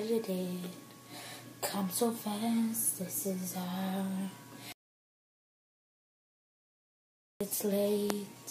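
Audio dropout to silence, 4.72 to 7.41 s: the sound cuts to silence for 2.68 s, likely a lost input while recording continued.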